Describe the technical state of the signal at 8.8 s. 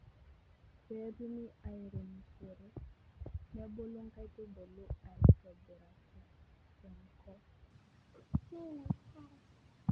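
At 8.8 s you're inside a wrong sample rate stretch that runs from 7.70 s to the end at 9.91 s. The speech plays 1.5 times too fast with pitch up about 7 semitones, which fits 16 kHz material played at 24 kHz, so it sounds chipmunky and rushed.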